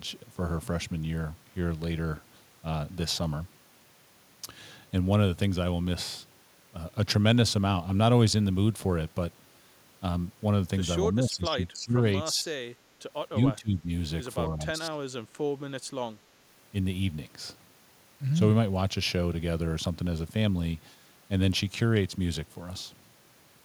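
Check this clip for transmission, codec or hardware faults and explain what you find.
The speech is repeatedly pushed down between 11.16 and 15.06 s, at 11.16–12.04, 12.32–12.58, 13.31–13.88 and 14.48–15.06 s. It dips by roughly 15 to 20 dB in broken patches. This is likely speech suppressed in double talk, where the echo canceller mistook the talker for loudspeaker echo and attenuated it.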